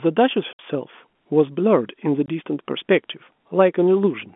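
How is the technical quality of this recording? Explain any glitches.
The recording has two dropouts in a narrowband telephone-style signal limited to roughly 200 Hz to 3.5 kHz. Those dropouts come from packet loss filled with silence: at 0.53 to 0.59 s, about 60 ms, and at 2.26 to 2.28 s, about 20 ms, packets never arrived and the receiver inserted silence. Both gaps are multiples of 10 ms, which fits 10 ms packets. The speech is abruptly cut, with hard edges.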